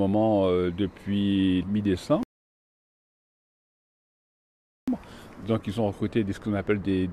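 At 2.23 s the sound cuts abruptly to silence. This is a rebuffering stall. The player used up its downloaded audio and had to wait for more to arrive. The gap lasts until 4.88 s, so about 2.64 s of dead air is added. Playback then picks up exactly where it stopped. Nothing is skipped or repeated. The only damage is the inserted pause, which breaks the flow of the audio.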